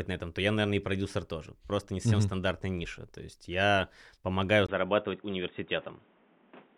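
Speech clip, with an input switch to a poorer device at 4.67 s, right after "есть я помогаю": a 20 ms gap, then band-limited sound with nothing above 3.8 kHz, new background noise, unchanged level, likely a microphone change.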